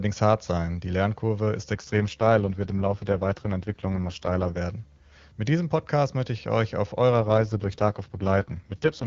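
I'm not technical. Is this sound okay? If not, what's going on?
No. The speech has two AMR rate drops. From about 1.74 to 4.58 s, and again from 7.12 s just after "möchte ich euch auf" to the end at 9.06 s, the voice turns rough and buzzy. It sounds more robotic. The phone network switched the call to a much leaner coding mode to protect a weak connection. The sound stays just as wide and never cuts out. The clear HD Voice quality returns once the full rate resumes.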